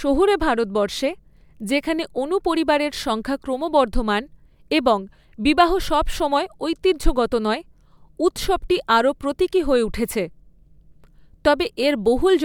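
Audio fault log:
No faults heard anywhere in the speech.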